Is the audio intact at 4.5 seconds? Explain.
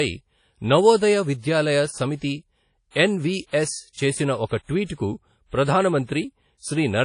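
No. From 4.48 to 4.51 s there is pre-echo: a short hiss smeared over about 34 ms before a sharp onset, softening the attack. The transform block spreads noise sized for the loud attack back into the quiet gap before it. Unlike reverb or a tail, the smear arrives before the sound.

This sits on WMA compression heard throughout, with a washy, ringing hiss that breathes with the signal and nothing above 10.1 kHz. That likely points to an old WMA encoder at a low bitrate around 32 kbps. A plain low-pass filter would lose the top without this washy noise.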